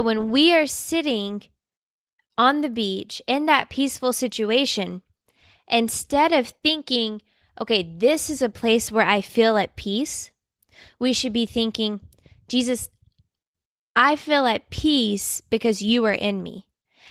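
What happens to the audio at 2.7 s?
Nothing goes wrong at 2.7 s: the speech there comes through intact, carried by Opus voice compression in its hybrid mode at 20 kbps, full band.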